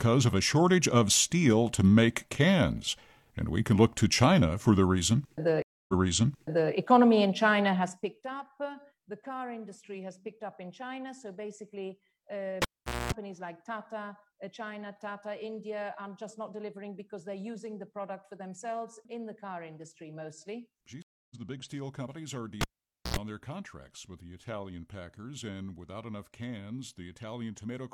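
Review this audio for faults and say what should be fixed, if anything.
Two stream reconnects show up. At 5.62 to 6.72 s the player drops out for 261 ms, then a fresh decoder picks up 0.84 s earlier, so a chunk repeats. At 21.02 to 21.36 s there's 279 ms of silence and it resumes about a fifth of a second later, skipping material. Worth fixing: a bigger jitter buffer and a client that resumes from its last position would hide these.

The cable gets pulled and plugged in twice. At 12.62 to 13.12 s you get a pop, about 0.45 s of near silence, 232 ms of 60 Hz mains buzz while only the tip makes contact, then a second pop. At 22.61 to 23.17 s it's the same pattern: roughly 0.5 s unplugged and an 86 ms buzz burst. Mute the channel or use a locking connector before anyone touches that cable.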